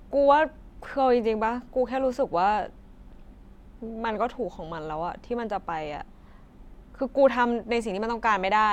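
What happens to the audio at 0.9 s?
Nothing goes wrong at 0.9 s; the speech there plays through cleanly and without interruption.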